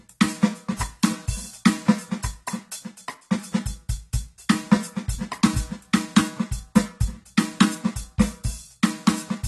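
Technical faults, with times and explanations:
Throughout, AAC compression. Nothing sounds above 12.1 kHz, so the music is dull. Sustained tones warble, and bright detail turns fizzy and smeared. This is likely a low-bitrate AAC-LC encode, around 32 kbps, cutting the top band and coarsely quantising the rest.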